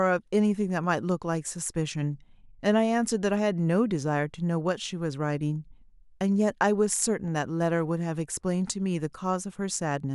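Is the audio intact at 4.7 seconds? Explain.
Yes, at 4.7 seconds the audio is intact, with no audible fault at that moment.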